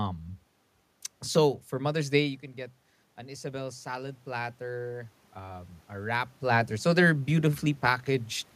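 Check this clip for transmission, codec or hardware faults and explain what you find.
One fault stands out: automatic gain rising, from 3.17 s to 6.26 s, just after "you can get". The input level falls by about 9 dB, so the automatic gain control slowly adds about 6 dB over three seconds, and voice and room noise swell together. The level shifts near 2 s and 6.5 s sound like the talker moving relative to the microphone.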